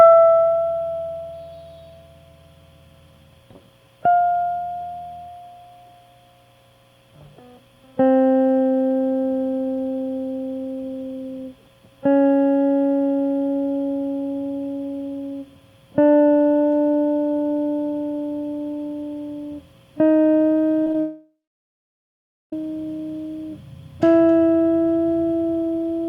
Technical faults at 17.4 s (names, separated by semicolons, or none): none